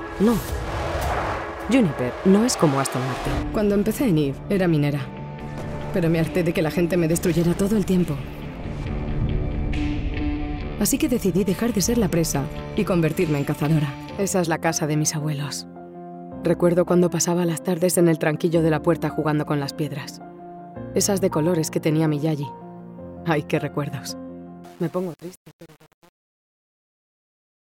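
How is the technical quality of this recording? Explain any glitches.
The recording has one clear glitch, confined to the ending.

From 24.64 s to the end at 27.7 s, the fade-out picks up truncation distortion on a fade. The gain stage performing it discards low-order bits without dither, so as the level drops the waveform collapses into a few coarse steps. The grit is worst throughout this stretch, which points to a path holding only about 7 bits. The tail turns gritty. Unlike a noise gate chattering, the grit tracks the falling level and stays tied to the fade.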